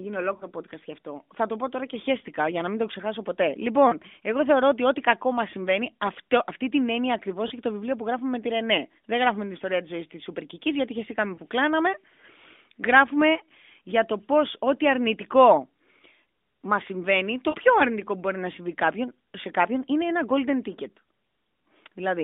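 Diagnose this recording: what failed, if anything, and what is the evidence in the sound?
Lost AMR speech frames are the failure, at the network stage. Short gaps fall at 0.38 to 0.47 s, 3.88 to 3.95 s, 7.48 to 7.52 s, 11.36 to 11.40 s and 17.50 to 17.56 s. The gaps at 0.38, 7.48 and 11.36 s fit about 20 ms of missing audio, the others about 40 ms. Radio errors corrupted those frames. The narrowband AMR decoder, its band capped near 3.6 kHz, replaced each lost frame by repeating the last good pitch and vocal-tract settings with falling gain. That gives a brief dip or warble at each single lost frame.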